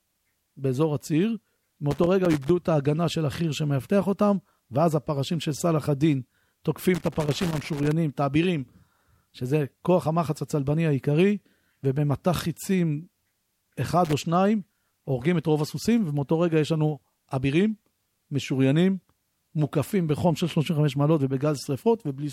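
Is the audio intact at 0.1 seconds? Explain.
Yes, at 0.1 seconds the speech plays through cleanly, with no dropout, click, distortion or other fault at that point.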